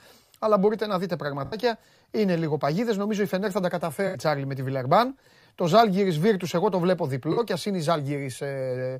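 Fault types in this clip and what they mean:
Corrupt frame concealed: at 1.45 to 1.55 s after "μπορείτε να δείτε", 4.07 to 4.18 s after "θα τα", and 7.32 to 7.39 s after "εγώ το βλέπω", the decoder covered over damaged frames. Flipped bits made these AAC frames undecodable. The decoder caught the damage and filled the gap itself instead of letting a squeak through. Each gap's length fits roughly three lost frames.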